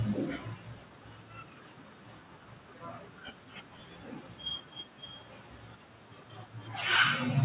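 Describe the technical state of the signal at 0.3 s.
Automatic gain falling from 0.05 to 0.69 s: the gain control judged the input too loud or its background noise too strong and eased it down by about 3 dB, so speech and background sink together.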